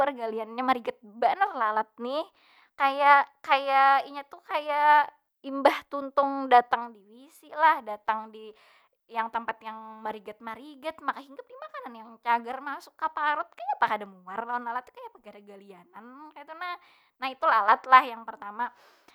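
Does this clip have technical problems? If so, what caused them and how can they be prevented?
No, nothing stood out as a technical problem on listening, so there is no cause to trace or prevent here.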